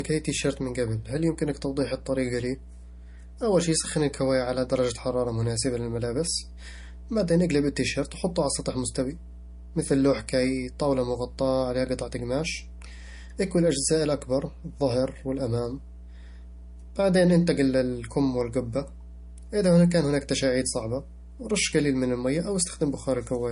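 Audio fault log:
Throughout: mains hum. A steady 60 Hz tone sits about 20 dB below the speech, coupled in from the power line by a ground loop or nearby transformer. A spectrogram shows an unbroken horizontal line at 60 Hz with some low harmonics, and the waveform never settles to silence between phrases.
Throughout: low-bitrate audio saved at a high bitrate. Nothing is present above 10.6 kHz, and the speech still carries the artefacts of the first encoding. A spectrogram shows a flat wall at 10.6 kHz with patchy, blocky energy below it, which likely comes from a low-bitrate MP3 later re-encoded at a high bitrate.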